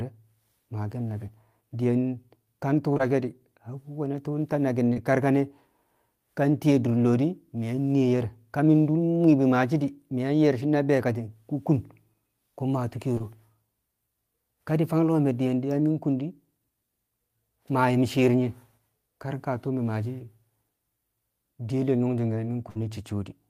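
At 2.93 s and again at 2.97 s, two back-to-back instances of short concealed packet loss occur in this speech. Each drops about 20 ms of audio that the decoder never received in time. The receiver bridges each hole by extending the preceding sound for roughly 20 ms, then crossfades into the real signal, giving a smear across about 80 ms. The same fault recurs at 4.93 s and at 13.18 s, just after "maa tu̱u̱". Each time it is a single 20 ms gap heard as a brief smear or wobble.

At 22.70 s a burst of packet loss removes about 60 ms of audio, which fits three consecutive 20 ms packets going missing. The concealment holds the last sound for roughly 57 ms and lets it decay, so it comes out as a short sustained buzz or fading hiss. Normal audio resumes at 22.77 s with the intervening material gone.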